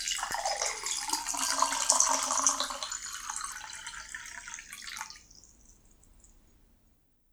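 A sudden voltage step, most likely from a plug, switch or static discharge, was added to the signal at 0.31 to 0.33 s, producing a single loud pop about 10 dB above the surrounding sound, which continues unbroken underneath the sharp, brief thump.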